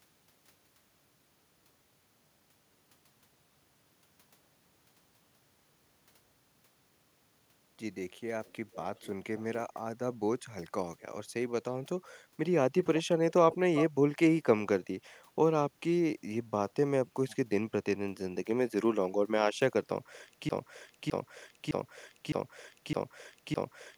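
At 8.45, 8.72 and 8.96 s, then at 13.52 s, short scraps of echo leak surface, faint and far below the speech, trailing it by about 412 ms and later 356 ms. The likely cause is a far-end loudspeaker whose echo canceller passed residual pickup back.

From 20.49 s to the end, a broken-record loop takes over: a 0.61 s fragment repeats exactly six times, back to back, replacing the audio that should have played. This likely reflects a stalled player, encoder or stream resending its last buffer.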